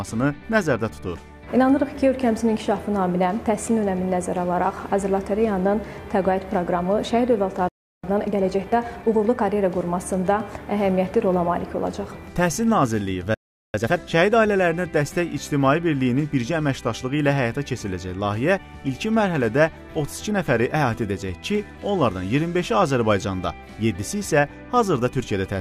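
At 7.68 s the sound cuts out mid-flow and stays silent for about 0.35 s. This is a playback stall, likely the player running short of data or having its thread blocked. Output resumes at 8.04 s. From 8.04 to 9.42 s a time-compressed catch-up follows. The player trims its backlog by cutting out short slices and cross-fading across the gaps. The audio runs 1.25 times fast at normal pitch. A second stall hits at 13.34 s, silencing the sound for about 0.4 s until 13.74 s. A sharper catch-up then runs from 13.74 to 14.12 s at double speed. It sounds clearly rushed, though the pitch stays put.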